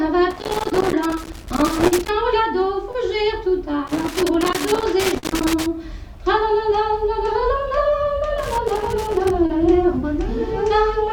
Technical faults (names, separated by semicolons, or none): loose connector crackle; short concealed packet loss